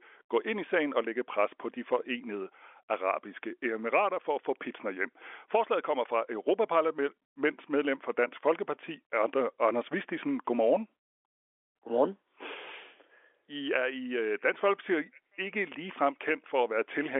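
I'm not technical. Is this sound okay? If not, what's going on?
Yes, nothing is wrong here.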